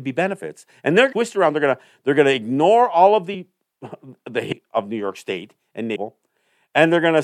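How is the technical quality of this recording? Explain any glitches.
The recording has four audible dropouts where chunks of the speech vanish. Compressed frames skipped occur at 1.11 s, 3.33 s, 4.51 s, and 5.95 to 5.97 s. Whole blocks of coded audio, which fit frames of about 26.1 ms, are never decoded, so playback leaps ahead by roughly 300 ms, 100 ms, half a second, and 300 ms. Because adjacent frames overlap, each join sounds like a short smeared blip, not a sharp click.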